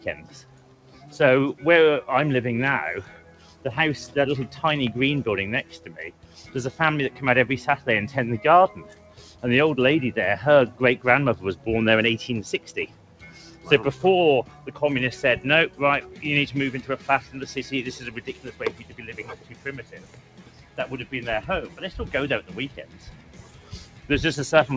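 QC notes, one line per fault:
Throughout, noise suppressor applied to music or sounds: the level swings by roughly 10 dB as held material and ambience sink and then recover, so the audio pumps, flutters or thins out. A speech-tuned suppressor stayed active and treated steady tones, ambience and reverb as noise.
0.00–1.63, 3.04–3.65, 5.63–7.87, 8.79–9.43, 10.71–11.66, 12.58–14.71, 15.70–20.78 and 21.69–24.09 s, sound cut by the noise suppressor: steady or decaying parts duck by about 8 to 9 dB, while sudden onsets mostly pass. The longest stretch is 15.70–20.78 s, with around 3 s pulled down. The suppressor misread these parts as noise. The high-frequency limit near 8 kHz is consistent with a 64 kbps G.722 call path.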